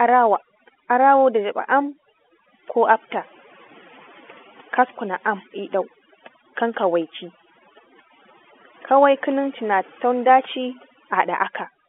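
Overdone noise removal runs through the whole recording. The suppressor is set so aggressively that any band near its noise estimate is cut away. This leaves a lowered background that breaks up into twinkling specks, and speech within the narrow telephone band.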